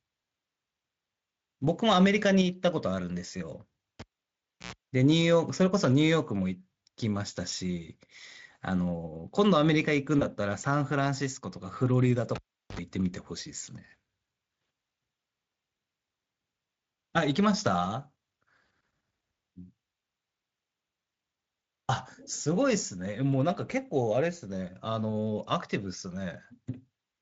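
It's a speech clip with the cable pulled and plugged in twice. At 4.0 s a pop drops the audio to near silence for about 680 ms, then a roughly 96 ms burst of 60 Hz mains buzz comes in as the plug tip makes contact, and a second pop brings the signal back at 4.73 s. The same thing happens from 12.35 to 12.80 s, with about 390 ms of dropout and a shorter buzz of roughly 67 ms, this time at 50 Hz. At 10.19 s there's VoIP packet loss concealed by the speech codec. A single 20 ms frame went missing, and the decoder filled the gap by extending the previous pitch and spectral shape at falling gain, so you hear a short stretched, fading smear. The speech stays weak and coloured until about 10.25 s, while the decoder's state catches up. Underneath all this, the Speex coding adds only light coding damage.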